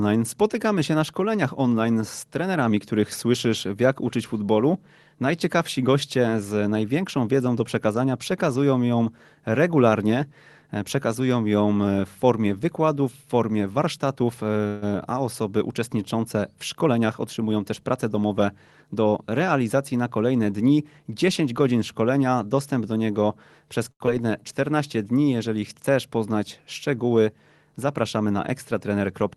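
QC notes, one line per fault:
14.67–14.84 s, call audio freeze: the speech hangs for about 145 ms, with the last sound drawn out into a fading buzz instead of cutting to silence. Afterwards it carries on from exactly where it stopped, so nothing is lost, just a gap pushed in. That's likely packets held up in transit, leaving the jitter buffer empty while the receiver kept the last sound going until the packets arrived.
16.75–18.29 s and 27.86–28.97 s, jitter buffer speed-up: both stretches run hurried at unchanged pitch, about 109% speed in the first and 107% in the second (the second right after "chcesz poznać szczegóły"). The buffer had more audio than it wanted, so the receiver trimmed out tiny pitch-period slices over and over, roughly 150 ms in total the first time and about 100 ms the second, to pull the delay back down.
23.92–24.02 s, short stall from a late packet: right after "dostęp do niego przez", one sound gets held about 85 ms too long, with a faint buzzy sustain. 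A packet wasn't there on time, the buffer ran dry, and the receiver stretched the last bit of audio until it showed up, then resumed at the same spot, so nothing goes missing.
24.06–24.09 s, short concealed packet loss: just after that stall there's a quick smear or wobble. About 40 ms of audio never made it to the decoder, and the receiver papered over it with a very brief extension of the preceding sound before blending back in. The real content in that hole is gone, so a short sound there can disappear.
24.21–24.41 s, jitter buffer slow-down: the speech drags here at about 85% speed, still at normal pitch, with sounds drawn out and maybe a slight warble. After the dropout the buffer was short of reserve, so the receiver repeated single pitch periods back to back, adding about 37 ms to rebuild its cushion.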